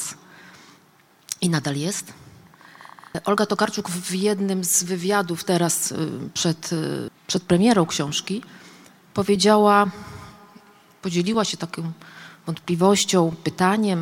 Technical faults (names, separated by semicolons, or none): periodic USB or driver dropouts